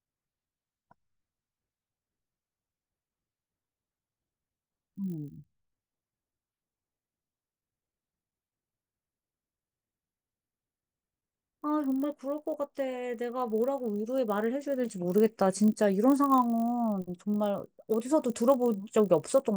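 Throughout the speech, a resampler restarted on every block leaves a buzz at 50 Hz: each 20 ms block was converted alone, so its edges carry small errors. The waveform shows tiny steps every 20 ms; the spectrogram shows regularly spaced vertical striations, only during speech.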